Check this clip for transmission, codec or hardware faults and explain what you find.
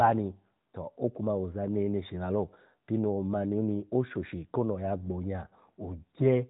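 Nothing in this speech stood out on listening as a transmission, codec or hardware problem.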